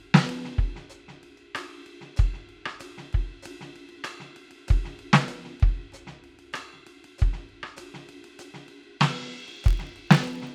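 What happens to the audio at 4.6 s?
At 4.6 s the music plays through cleanly, with no dropout, click, distortion or other fault at that moment.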